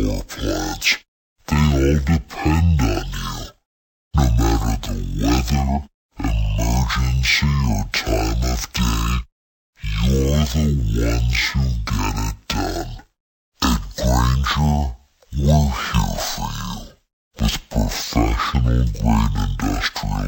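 From start to finish the clip shows stereo read as mono. Interleaved left and right samples have been taken one after another as a single channel, so each stereo frame yields two consecutive mono samples. The speech therefore plays at 0.5 times its proper speed and sits a full octave, 12 semitones, below its natural pitch, sounding slow and dragged. A fainter mirror image of the sound also appears in the upper half of the spectrum.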